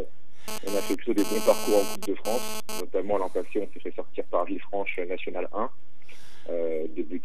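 From 0.48 s to 2.81 s, a GSM phone buzz sits over the sound. A nearby 2G phone is sending in bursts about 217 times a second. The audio circuit rectifies those radio pulses into the signal path. The result is a hard, raspy buzz at 217 Hz, rich in harmonics and unrelated to the audio. It runs about 10 dB below the signal. Because the phone is moving data, the buzz comes and goes.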